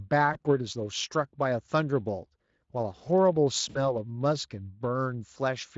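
At 0.33 s, VoIP packet loss concealed by the speech codec briefly smears the speech until 0.39 s. The gap fits one lost 20 ms frame. The decoder fills it by repeating its last pitch and spectral shape at falling gain. A longer loss follows from 3.69 to 3.97 s, fitting about 60 ms of missing audio. There the speech stretches into a buzzy tone or coloured noise that fades, and stays weak after packets resume. The Speex coding itself carries only light damage.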